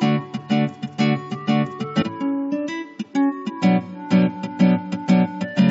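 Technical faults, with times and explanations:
2.01 to 2.03 s, damaged data in a compressed stream: the decoder misreads the corrupted frames and loses sync, producing a short blip, seen as a thin broadband vertical streak and an abrupt waveform break.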